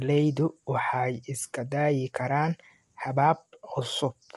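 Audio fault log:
Throughout: low-delay AAC compression. The speech sounds rough and grainy, with noise filling the gaps between harmonics. Nothing is heard above 11.7 kHz. The likely cause is AAC-ELD, whose short frames resolve pitch poorly. The plain damage fits a bitrate near 32 kbps.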